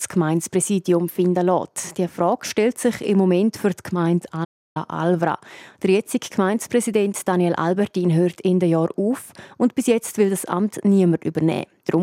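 A playback stall interrupts the audio at 4.44 s: the sound stops in mid-flow and the output stays silent for about 310 ms, until 4.77 s, when it carries on. The likely cause is the player running out of data or having its thread blocked. Unlike a natural pause, the sound doesn't trail away but is cut mid-flow, and unlike a brief dropout or click, the silence lasts long enough to be heard as a hold-up.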